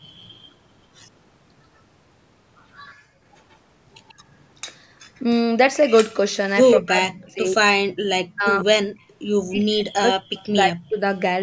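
Speech with faint, delayed repeats of the far talker at 0.0 to 0.52 s, 2.9 to 4.14 s, 9.0 to 9.13 s and 10.34 to 10.48 s. These sit about 30 to 35 dB down and trail by 139 ms, likely echo leak from a loudspeaker the echo canceller didn't fully cancel. The room sound drops out abruptly at 2.95 to 3.21 s (about 31 dB) and briefly at 8.95 to 9.0 s (about 12 dB). That is background gated by the echo canceller, which clamped the microphone while the loudspeaker played. Between 6.76 and 10.97 s the talker's voice repeatedly dips and cuts out, by as much as roughly 40 dB over about two seconds in total. This is likely speech suppressed in double talk, with the canceller muting the talker while both sides spoke at once.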